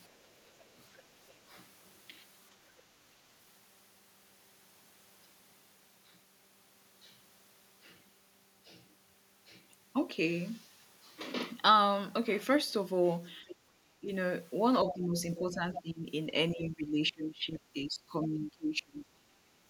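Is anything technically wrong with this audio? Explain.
Yes. Echo control on this speech call breaks down in two ways.

Other side's voice leaking through occurs at 1.28, 13.48, 15.35 and 15.75 s. Brief scraps of a second voice appear. They are very faint at first, then grow much stronger. The likely cause is a loudspeaker echo the canceller failed to remove.

Speech suppressed in double talk occurs at 14.0–14.11, 14.85–15.18, 15.37–16.06 and 16.52–19.06 s. The talker's level drops sharply, by as much as about 20 dB. The last stretch is the longest. Both sides were likely talking at once, so the canceller turned everything down.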